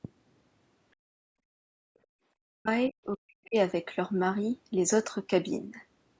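From 0.95 to 2.12 s the room tone under the speech gets pulled down hard, about 37 dB at its deepest, so the background keeps ducking out and coming back. That's background gated by the echo canceller: it heard the loudspeaker playing and clamped the mic until it let go.

Then the talker's own voice starts dropping out in chunks, at 2.4 to 2.69 s, 2.89 to 2.97 s and 3.17 to 3.57 s, sinking by something like 40 dB each time. It's likely speech suppressed in double talk, with the canceller unable to tell the near voice from the far-end echo and squashing both.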